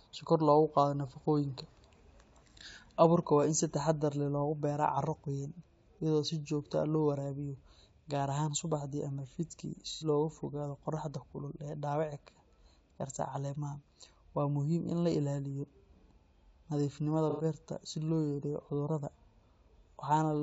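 Throughout the speech there is a rough, grainy texture, with noise filling the gaps between harmonics and a thin, synthetic-sounding top band. This is likely low-delay AAC compression (AAC-ELD). Its short frames cannot separate pitch harmonics cleanly, and the damage is plainly audible at a rate around 32 kbps. On a spectrogram the harmonic stripes look smeared, with speckled energy between them and a flattened, patchy high band.

AAC frame loss with concealment occurs three times. At 2.51 s a brief gap of about 30 ms, the length of a single frame, is covered by the decoder repeating the last good spectrum, giving a short smeared, noisy blip. At 9.92 to 10.06 s, right after "ahaan subaxdii ama fiidkii", and again at 17.30 to 17.44 s, just before "beerta si loo", about 90 ms is concealed, enough for roughly three frames. These longer patches sound phasey and washed out. On a spectrogram they appear as vertical blocks of blurred, frozen texture with lost harmonic detail.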